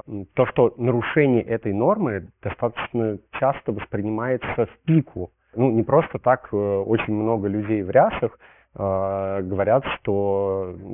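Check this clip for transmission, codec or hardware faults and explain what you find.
One fault runs through the whole recording: aliasing. For the full duration, the speech was reduced to a much lower sample rate, which fits about 6 kHz, without an anti-aliasing filter. Everything above the 3 kHz fold point mirrors back below it as false, inharmonic tones, fairly strong at roughly 15 dB under the speech. Sibilants come out gritty and metallic, and the spectrum stays dense right up to 3 kHz. Plain band-limiting would sound dull but clean; here the harshness comes from tones that don't belong to the voice.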